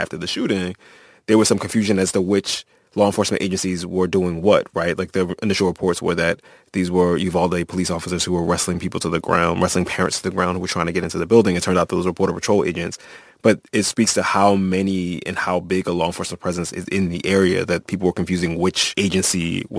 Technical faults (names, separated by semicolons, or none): aliasing